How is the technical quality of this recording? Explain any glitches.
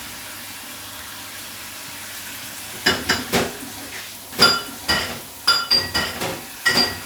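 One glitch stands out. From 4.32 s to the end, a doubled audio track appears. An equal-level copy trails about a second behind, starting abruptly, likely from a second, slower capture path.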